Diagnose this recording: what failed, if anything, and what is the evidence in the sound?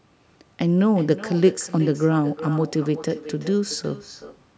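The failure sits in the call path: an echo with no canceller runs through the whole clip. Every stretch of speech is trailed by a quieter, thinner copy, about 15 dB down and arriving roughly 0.4 s later. That delay is the round trip to a far end whose loudspeaker feeds its own microphone with nothing removing it. A spectrogram, band-limited to 8 kHz by the call's microphone processing, shows each syllable's harmonic pattern repeated faintly to the right. The waveform shows matching low-amplitude ghost envelopes.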